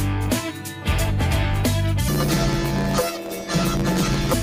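From 2.08 s to 4.34 s, planar audio is being read as interleaved: each block stores every left sample followed by every right sample, but the reader treats it as alternating left-right pairs. Each block's left half and then right half therefore play back at double speed within the block's normal time span. The blocks last about 11.6 ms, which fits a 512-sample block, so they are too short for an octave jump to register. Instead, a robotic buzz repeats at roughly 86 Hz over the sound.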